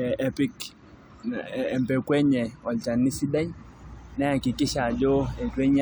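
Nothing technically wrong turns up anywhere in this short bit of speech, so there's no fault here to time or trace back to a cause.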